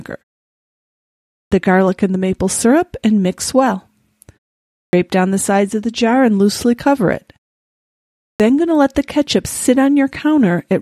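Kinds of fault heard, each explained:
Clipped start after a pause: the output device dozes off during silence and needs a moment to wake, so the opening gets swallowed. Here speech jumps in abruptly at 1.29, 4.68 and 8.18 s, each time missing roughly 0.22 to 0.25 s.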